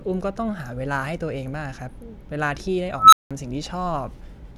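At 2.96 s the speech is interrupted by an unstable filter: a recursive filter stage has been given bad coefficients that put it past its stability limit, so its output feeds back on itself and grows without bound. A tone of around 1.5 kHz swells over about 0.16 s into a loud, clipped squeal. The arithmetic then overflows and the output drops to silence for about 0.18 s until the filter resets, with sound returning at 3.31 s.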